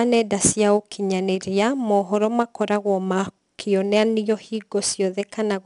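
Throughout, the speech carries a gritty hiss that swells and fades with its loudness, and nothing reaches above 10.6 kHz. This is 4-bit ADPCM compression. Each sample is stored as a coarse step from a prediction, so the leftover error rides on the signal, at a rate that fits about 89 kbps.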